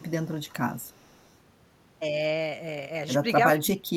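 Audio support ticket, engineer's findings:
Echo leak, 0.00–0.76 s, 0.92–1.22 s, 3.55–3.59 s. Faint delayed copy of the sound trailing by 358 ms, roughly 35–40 dB below the direct signal, with a stronger scrap near 3.55 s. Likely far-end echo canceller under-suppressing loudspeaker pickup and returning it.

Speech suppressed in double talk, 3.60 s to clip end. Level dips sharply, around 35 dB at deepest, over the final ~0.4 s. Likely echo canceller unable to separate near talker from loudspeaker echo, attenuating both together.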